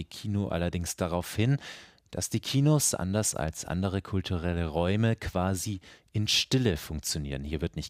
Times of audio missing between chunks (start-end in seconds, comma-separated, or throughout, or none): none